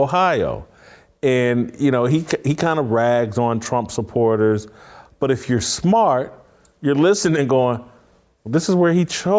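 No technical faults can be heard anywhere in this speech recording. Nothing in the audio calls for a timestamp or any further comment.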